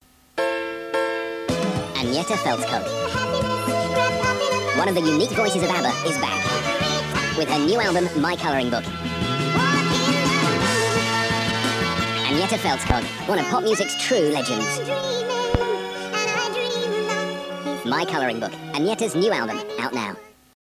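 Wrong sample rate runs throughout the whole clip. The audio plays about 1.45 times too fast, and its pitch is raised by about 6.45 semitones because speed and pitch shift together without conversion. This fits material made at 22 kHz being played back at 32 kHz.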